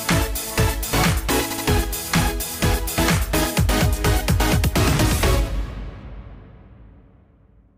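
Repeated frames occur from 1.51 to 1.66 s: a block of compressed audio about 86 ms long, consistent with a run of five frames, is decoded and played two extra times, producing a brief stutter and stretching the audio by about 151 ms.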